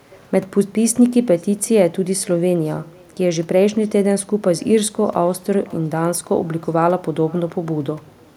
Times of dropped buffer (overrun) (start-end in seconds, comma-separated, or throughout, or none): none